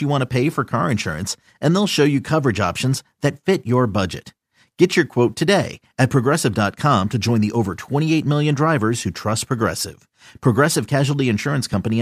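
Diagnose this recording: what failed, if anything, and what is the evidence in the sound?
Nothing failed: there is no fault to diagnose in this speech recording and no evidence of one in the sound.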